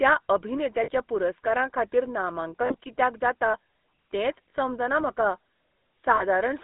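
The whole clip runs through the GSM full-rate codec, with buzzy, gravelly speech squeezed into roughly 200 Hz to 3.6 kHz, consistent with a 13 kbps line. Lost GSM frames then show up at 0.84–0.89 s, at 2.66–2.76 s just before "कित्याक जाता तेंच समजना", at 4.50 s between "कित्याक जाता तेंच" and "समजना म्हाका", and at 6.16–6.22 s. In each spot the decoder holds the last good frame for a brief rough, metallic ring.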